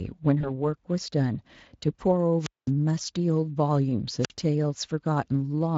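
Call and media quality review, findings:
VoIP packet loss concealed by the speech codec, 0.41–0.51 s: decoder extrapolates and fades out, giving a brief buzzy smear and weak recovery; the gap fits a single lost 20 ms frame.

Wireless microphone squelch dropout, 2.39–2.71 s and 4.19–4.33 s: FM receiver squelch mutes on signal fade, with a hiss rise then near silence of about 210 ms and 49 ms, respectively.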